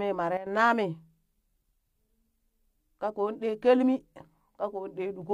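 Speech, with a sudden gain jump from 0.37 to 0.46 s: level and background noise drop together by about 11 dB, then snap back. The waveform envelope steps abruptly down and up. The spectrogram shows an evenly darker vertical band, likely from a gain change applied without a ramp.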